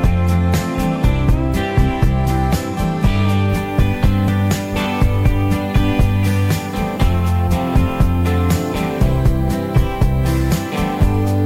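From 3.49 s to the end, the audio shows low bit depth with noise shaping. The signal has been reduced to 9 bits, and the rounding error has been fed back so that most of it is pushed into the upper frequencies. The result is a steady, thin hiss that gets brighter toward the top of the band, sitting around 30 dB below the signal. On a spectrogram, a continuous noise floor appears at 3.49 s and thickens toward the highest frequencies. On the waveform, quiet passages no longer fall to silence.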